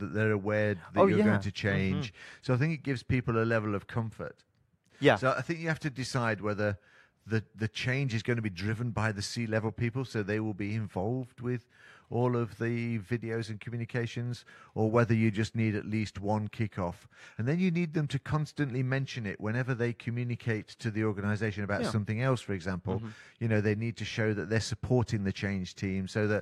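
No technical fault can be heard anywhere in the speech. Nothing in the audio points to a problem in how it was captured, processed or delivered.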